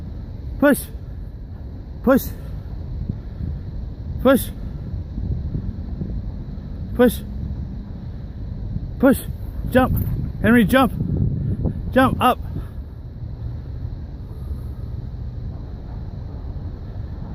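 Nothing goes wrong anywhere in this audio, so there's nothing here to flag.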